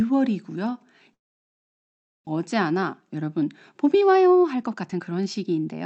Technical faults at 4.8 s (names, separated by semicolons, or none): jitter buffer speed-up